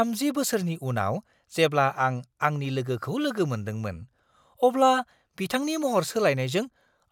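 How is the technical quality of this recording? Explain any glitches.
No glitches turn up anywhere in this recording, so there's nothing here that needs explaining.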